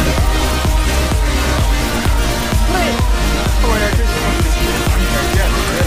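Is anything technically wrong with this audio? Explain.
No, no technical faults present.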